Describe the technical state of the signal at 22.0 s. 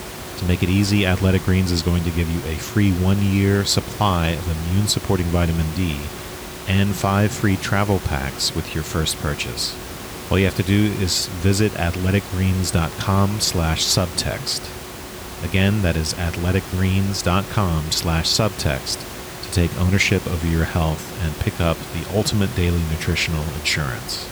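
At 22.0 s the signal is intact, with only the room's own background noise sitting about 13 dB below the speech.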